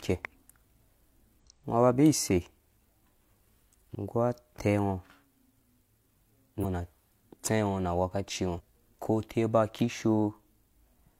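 Damaged data in a compressed stream disrupts the speech at 1.40–1.45, 3.90–3.95, 6.60–6.65 and 8.55–8.61 s, each a brief break of about 50–65 ms where the decoder misreads corrupt frames and resyncs. Its cause, corrupt frames and a decoder resync, sets it apart from a plain dropout's silence or a click's single spike.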